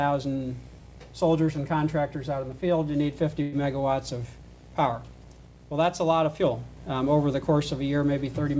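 At 3.42 to 3.54 s there's a call audio freeze: the last sound stretches into a fading buzz or hiss for about 104 ms, then the audio picks up exactly where it left off, with nothing lost. That's likely packets held up so the jitter buffer ran dry, leaving everything after it 104 ms later. The band tops out at 8 kHz, in line with G.722 at 64 kbps.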